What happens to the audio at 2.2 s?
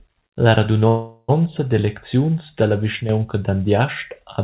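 Nothing goes wrong at 2.2 s: the speech carries on intact, with only the narrow telephone-band sound of the call path, which leaves nothing above 4 kHz.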